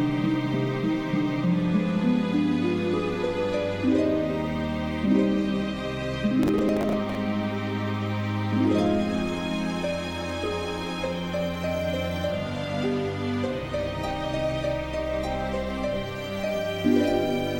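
Between 6.43 and 7.15 s the audio breaks into a gritty burst of processor overload crackle: the processor repeatedly misses its deadlines for short buffers, roughly 10 ms each, and about ten of them replay stale audio with hard edges before the load clears.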